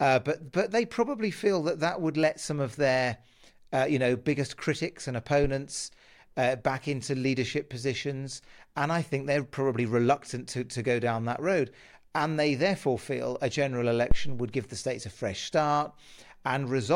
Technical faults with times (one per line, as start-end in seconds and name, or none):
14.11-14.52 phantom power thump